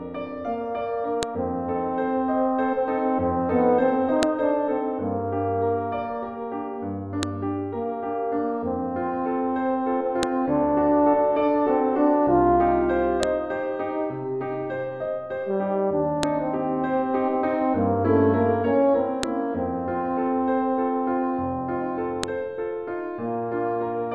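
You'll hear a sharp, loud snap at 1.23, 4.23, 7.23, 10.23, 13.23, 16.23, 19.23 and 22.24 s, spaced exactly 3 seconds apart. That's a file header played as audio. The stream was stitched from 3-second WAV pieces without stripping their headers, so each piece's header bytes get read as samples. Those bytes form a brief burst unrelated to the surrounding sound, which is why each click jumps out regardless of what's playing.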